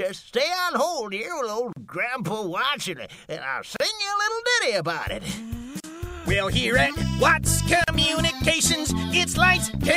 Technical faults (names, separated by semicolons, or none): gap at a join of encoded pieces